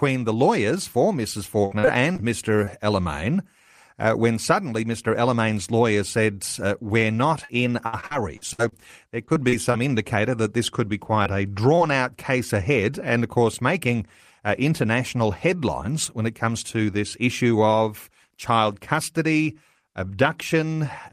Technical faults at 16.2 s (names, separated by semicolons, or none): none